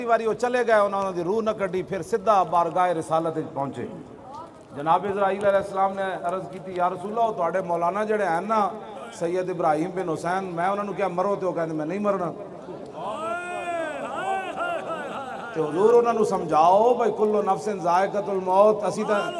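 A steady 20 Hz tick or buzz runs through the whole audio, the mark of a resampler restarted on every block. Each 50 ms block was converted alone, which fits a 48 kHz to 24 kHz conversion, so every block edge carries a small error. Unlike mains hum, it rides only on signal and vanishes in silence. Unlike buffer underrun clicks, its spacing stays perfectly regular and no audio drops out.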